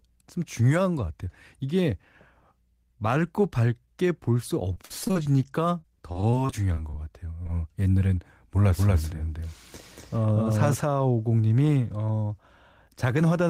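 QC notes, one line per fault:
4.73–5.27 s and 5.81–6.95 s, repeated packet loss (robotic sound): choppy stretches with pieces missing, as gaps of up to 44 ms are repeatedly patched by extending the preceding sound.
7.43–7.47 s, short concealed packet loss: a brief smear as roughly 20 ms went missing, filled by continuing the last sound, then blended back.
8.77–10.81 s, doubled audio track: a dry, equally loud copy trails about 200 ms behind and starts and stops abruptly, likely from a second, slower capture path.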